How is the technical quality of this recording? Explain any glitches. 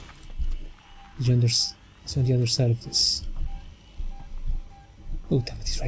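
No glitches or technical faults can be heard anywhere in the recording. It has passed through a wideband call codec, so nothing reaches above 8 kHz, which gives it the slightly dulled top end typical of a video or voice call.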